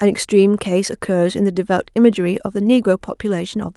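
No faults are audible in the speech; the call path shows only as a top end that stops at 12 kHz, consistent with Opus coding at roughly 48 kbps.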